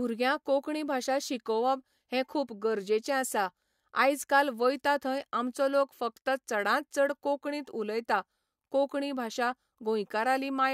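No technical faults can be heard anywhere in this speech recording. There is nothing to report at any point in the audio.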